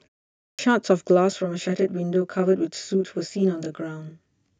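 At 0.53 s the speech resumes with a clipped start after a pause. The output device, idle through the preceding 0.53 s of silence, needs time to wake, so the first 57 ms of sound is lost and the onset arrives abruptly.

From 1.32 s to the end there is channel delay with comb filtering. One channel lags the other by roughly 20 ms, and summing to mono cancels shared content at evenly spaced frequencies starting near 20 Hz. The speech sounds rough or slightly doubled.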